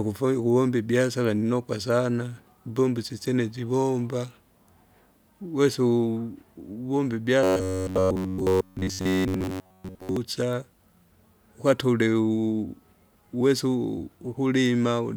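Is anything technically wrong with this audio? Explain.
Yes. From 7.43 to 10.17 s there is robotic sound from repeated short buffers. Audio likely arrives too late, so a slice of about 10.7 ms is replayed most of the time. That forces a 93.8 Hz metallic buzz that loosely follows the speech.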